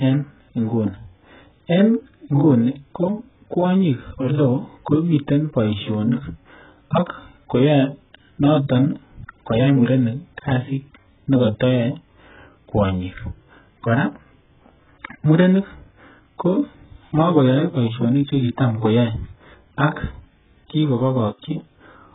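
Throughout, nothing sounds above 3.8 kHz, and the speech is dull, smeared and warbly, likely from heavy AAC compression at a very low bitrate, around 8 kbps.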